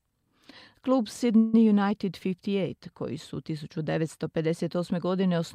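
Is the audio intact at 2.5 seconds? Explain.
Yes, the speech at 2.5 seconds is intact, with no audible fault at that moment.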